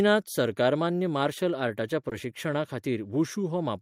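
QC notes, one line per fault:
2.09 to 2.13 s, short concealed packet loss: 20 ms of audio arrived too late, so the decoder extended the preceding sound, leaving a brief smear or wobble.
2.11 to 2.13 s, lost packet rebuilt from error correction: one packet was replayed from its low-bitrate in-band copy, so those 20 ms sound rougher and noisier.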